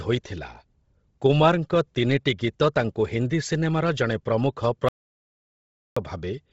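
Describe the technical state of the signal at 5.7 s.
At 5.7 s the signal is in an audio dropout to silence that runs from about 4.89 s to 5.97 s, roughly 1.08 s of nothing. The waveform is a flat line and the spectrogram is a blank column, with no room tone or noise floor at all. Whatever sounded during that stretch is gone. The likely cause is a lost input, such as a disconnected device, a broken link or a mute, while the recorder kept writing silence.

Before and after the gap, the speech carries heavy Bluetooth LC3 compression, which is likely the cause of its breathy, grainy texture. The spectrogram stops cleanly at about 7.7 kHz, with empty space above. Below that cut-off, the upper bands look smeared and speckled, where sparse detail has been padded with noise. The damage fits LC3 running at a low rate near 24 kbps with short 7.5 ms frames.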